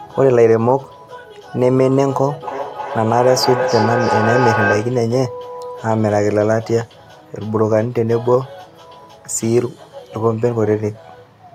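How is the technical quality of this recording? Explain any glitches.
The recording has one clear problem, a feedback echo between two devices, from 2.42 to 5.09 s. The speech keeps returning at intervals of roughly 300 ms, and the loudest return is only about 3 dB below the direct speech. Two devices in the same room are likely joined to one call, so each microphone picks up the other's loudspeaker. Each device's echo canceller removes only its own playback, so the loop continues. On a waveform, the syllable envelopes repeat at a regular spacing of about a third of a second. A spectrogram shows matching copies of the speech, evenly spaced along the time axis.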